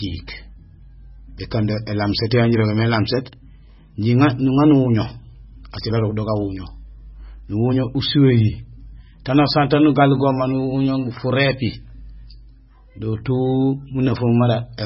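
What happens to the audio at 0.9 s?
At 0.9 s the speech sounds watery and swirly, with nothing above 5.5 kHz, as it does throughout the clip. This is likely heavy MP3 compression at a bitrate that sounds as low as 16 kbps, where the encoder drops the treble and switches weak frequency lines on and off.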